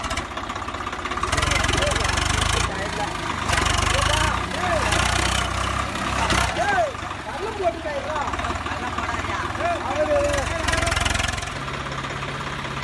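No technical faults can be heard in the signal, which runs without dropouts, distortion or timing disruptions of any kind.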